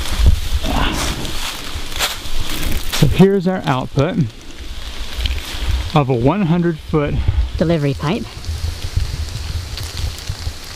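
From 7.58 s to the end at 10.76 s, a section at the wrong speed plays 1.28 times too fast, likely from being fitted to the wrong clock. Pitch rises about four semitones while tempo hurries, and that joint change, not pitch alone, marks it.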